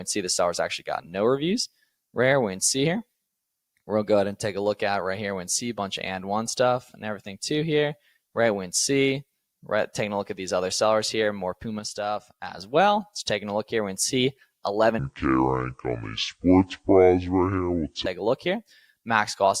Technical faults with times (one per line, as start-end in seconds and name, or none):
11.79-12.58 sudden gain jump
14.99-18.06 section at the wrong speed